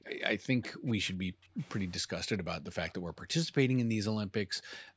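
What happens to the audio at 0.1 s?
At 0.1 s the speech carries an echo leak, spanning 0.05 to 0.1 s. A faint, delayed copy of the voice arrives 263 ms late, well below the direct sound. The likely cause is a far-end loudspeaker echo canceller letting residual microphone pickup return down the line.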